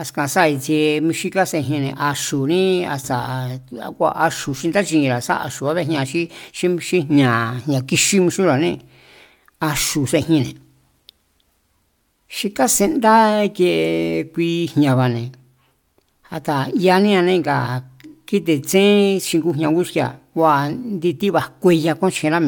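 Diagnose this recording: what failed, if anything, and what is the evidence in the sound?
Nothing failed; the sound gives no evidence of a fault in this recording.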